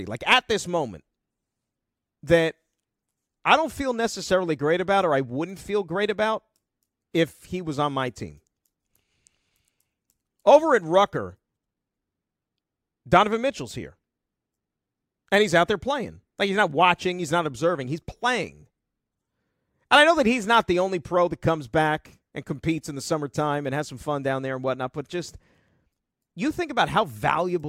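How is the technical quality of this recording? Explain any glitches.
No glitches or faults are audible.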